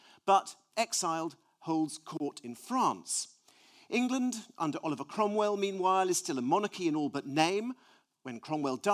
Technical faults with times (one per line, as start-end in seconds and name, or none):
none